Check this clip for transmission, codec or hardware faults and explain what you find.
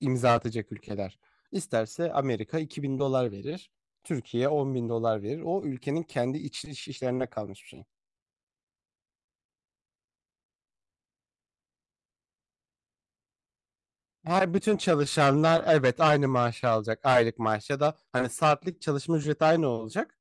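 Nothing turns up here at all; the speech comes through without any transmission, codec or hardware trouble to point to.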